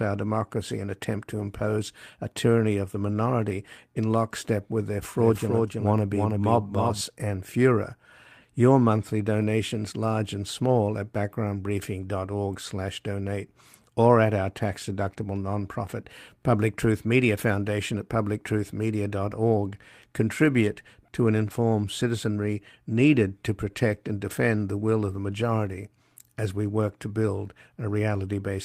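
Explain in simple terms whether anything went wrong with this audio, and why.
A couple of things slipped. First, lost packets rebuilt from error correction: right after "democracy and attempt to" (1.37–1.43 s), after "a tyranny of the" (3.07–3.09 s), then at 9.41–9.43 s and 12.51–12.53 s. Each time a chunk of sound went missing, and a rougher backup copy filled it in, so there's no gap, just a brief grainy patch.

Second, a doubled audio track from 5.17 to 7.01 s, just after "in lockstep with their". A second copy of the speech, a bit quieter, trails around a third of a second behind and switches on and off abruptly. It's likely a slower second capture path mixed back in.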